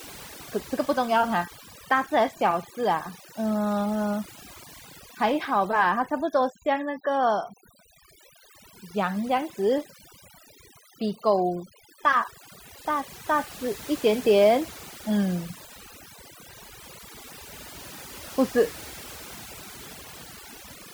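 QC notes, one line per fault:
Throughout: overdone noise removal. The noise reduction was pushed too hard, so any frequency band sitting close to its noise estimate gets pulled way down or shut off. Quiet parts of the speech vanish with it, leaving near-silent gaps full of twinkly specks.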